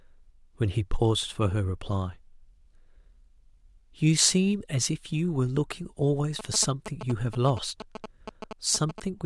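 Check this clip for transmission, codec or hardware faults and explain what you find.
There's one fault here. From 6.39 s to 9.0 s, GSM signalling bursts from a nearby 2G phone get rectified by the audio circuitry, giving a galloping dit-dit-dit of short 216.7 Hz buzzes roughly 10 dB under the speech.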